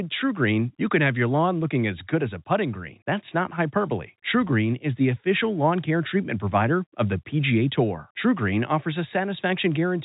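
Nothing goes wrong anywhere in this speech; it's simply carried over ordinary G.711 telephone coding, so the sound stops at around 3.8 kHz, just as a landline call would.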